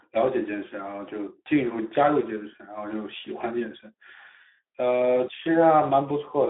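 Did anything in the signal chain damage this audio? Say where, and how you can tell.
Yes: the Speex codec stage, throughout. The sound is hoarse and noisy, confined to roughly 250 Hz to 3.7 kHz, which fits a low CELP bitrate near 11 kbps rather than simple band-limiting.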